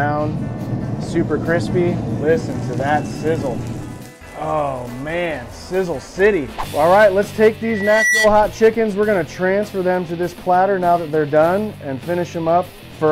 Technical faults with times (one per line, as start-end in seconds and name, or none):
7.62-8.31 loudspeaker feedback squeal